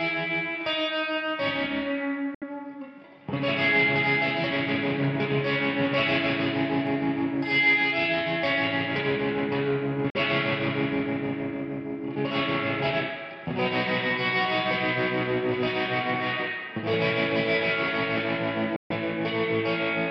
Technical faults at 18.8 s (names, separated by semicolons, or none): Bluetooth dropout